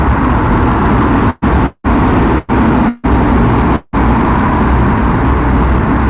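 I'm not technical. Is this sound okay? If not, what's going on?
No. Hard clipping runs through the whole recording: it's pushed louder than the system can handle, so every loud moment gets its peaks sliced flat and sounds crackly and fuzzy.

There are also five brief call audio freezes at 1.3, 1.66, 2.38, 2.89 and 3.76 seconds. Each one stretches the sound into a short buzz for about a tenth to a fifth of a second, twice trailing into a moment of silence, before it picks up where it left off. The likely cause is late-arriving data on a call connection, which would also explain the dull phone-line tone, with nothing above 4 kHz.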